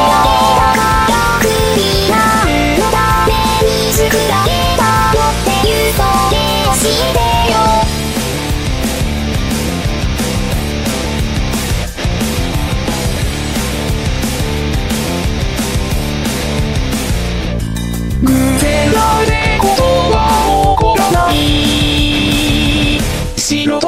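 Nothing goes wrong anywhere in this audio, so there's nothing to point out here.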